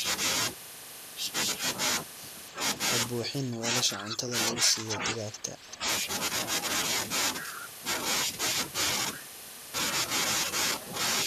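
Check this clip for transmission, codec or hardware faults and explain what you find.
Two related faults run through the speech between about 3.2 and 5.9 s: short echo leaks and dips in the talker's level during overlapping speech.

Echo leak, at 3.24–3.30, 4.11–4.16, 4.89–4.93, 5.33–5.38 and 5.72–5.76 s. Brief, faint copies of speech arrive 281 ms late, roughly 10 to 20 dB below the main voice. The likely cause is a far-end loudspeaker whose echo canceller let some of its microphone pickup return. Room reverberation would smear the sound continuously. These scraps instead repeat at one fixed delay, so they are discrete.

Speech suppressed in double talk, at 3.30–4.32, 4.55–5.12 and 5.31–5.86 s. The voice sinks by up to roughly 10 dB in the first stretch and by about 5 dB in the later two, over several hundred milliseconds each. This is likely an echo canceller that could not separate the near talker from the loudspeaker echo and turned both down. 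Packet loss would leave abrupt, clean gaps. These dips are softer, and they fall in the same stretch of the clip as the echo scraps.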